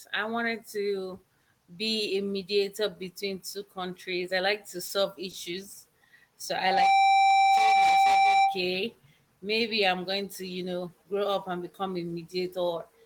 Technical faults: short stall from a late packet; loudspeaker feedback squeal

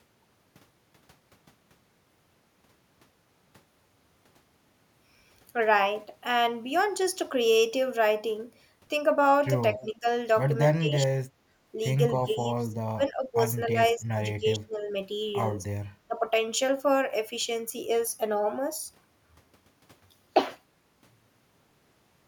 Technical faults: speech suppressed in double talk

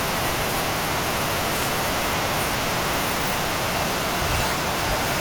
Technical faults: wireless microphone noise hit

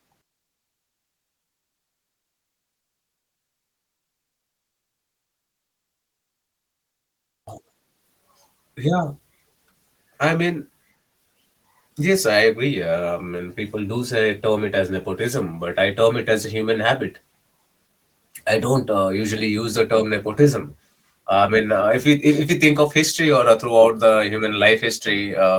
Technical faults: none

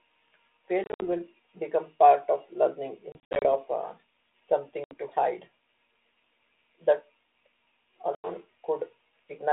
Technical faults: packet loss on an ADPCM call

